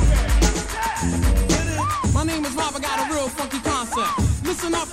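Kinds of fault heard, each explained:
Doubled audio track: a second full-band copy of the sound runs roughly 150 ms behind the original at about 5 dB lower, with no decay or room colour. It is already present as the clip opens and cuts off abruptly at 1.48 s, likely from a slower second capture path.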